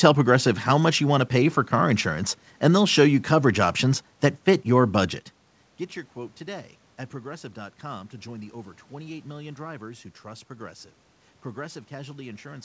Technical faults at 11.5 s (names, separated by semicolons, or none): none